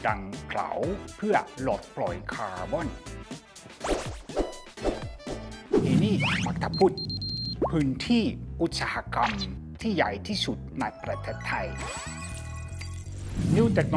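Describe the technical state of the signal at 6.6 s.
At 6.6 s the signal is intact, with no dropout, click, distortion or other audible fault at that point.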